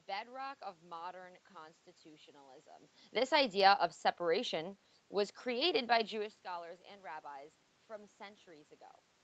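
No technical faults can be heard in this speech recording. The call path passes nothing above about 8 kHz, which is the expected bandwidth for this kind of call audio.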